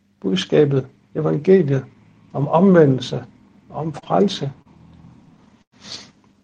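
Short stalls from a late packet at 3.99, 4.04 and 4.62 s: the jitter buffer ran dry, so the last sound is held about 20 to 35 ms, then resumes unchanged. Call audio freeze at 5.62 to 5.74 s: the sound halts for about 100 ms, mostly silence, likely from packets delayed in transit emptying the buffer before playback continued.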